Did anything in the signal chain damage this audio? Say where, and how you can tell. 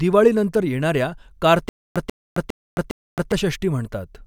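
Yes. The playback or streaming stage likely stalled, so each retry replayed the last buffered fragment and then ran dry: a stutter with silent gaps from 1.69 to 3.32 s in this speech clip. The same 139 ms burst of sound repeats four times, each followed by 268 ms of digital silence, returning at an even 407 ms period. That regular loop-and-gap rhythm marks a starved buffer, and the speech that should have filled that stretch is lost.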